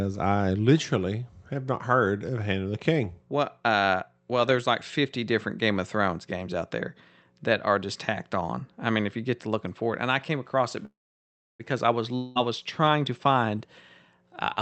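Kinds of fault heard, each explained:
Call audio freeze: After "I came across it", the sound halts for about 0.74 s, mostly silent. This is likely a jitter buffer running empty. It resumes with nothing missing.
Long network dropout: After "I was", about 0.2 s is lost and bridged by a short fading buzz or hiss. This is likely lost packets. The sound returns at "was trying to find".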